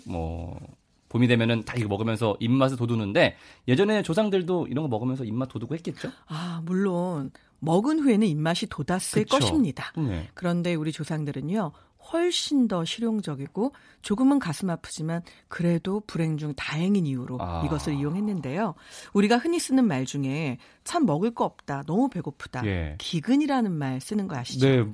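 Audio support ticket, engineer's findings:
Nothing stood out on listening to this speech clip.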